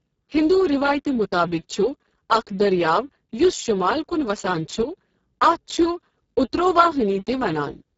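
From start to finish the speech carries heavy Speex codec damage. The CELP coder has too few bits for the excitation, which points to a very low setting of roughly 6 kbps, so the voice sounds hoarse, buzzy and close to robotic. Nothing is present above about 7.7 kHz, and the top band is only a hissy fill. Plain band-limiting would sound muffled but clean, while this grainy, vocoder-like roughness marks a starved codec.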